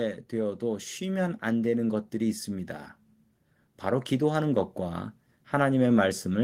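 From 0.3 s to 2.76 s the level climbs by about 4 dB as automatic gain rising takes hold: the gain control judged the input too quiet and turned itself up gradually, so the speech and the background noise swell together over those two and a half seconds.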